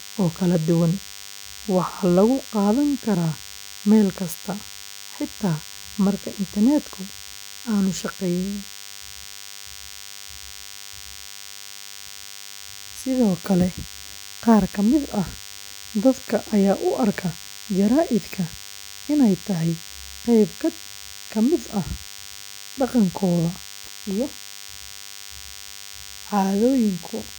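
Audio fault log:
Throughout: DECT cordless phone buzz, a thin, harmonic-rich 100 Hz buzz about 20 dB below the speech, from a nearby DECT radio bursting every 10 ms and being rectified.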